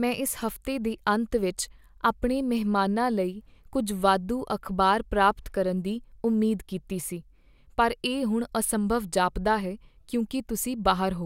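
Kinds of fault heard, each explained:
Resampler restarted on every block: from 4.19 to 7.68 s, after "ਲਈ ਕੁੱਝ" and before "ਪਰ ਇਹ ਹੁਣ ਅਸੰਭਵ", each 10 ms block is converted in isolation, leaving a small error at every edge, heard as a 100 Hz buzz riding on the speech. This fits a 44.1 kHz to 48 kHz conversion.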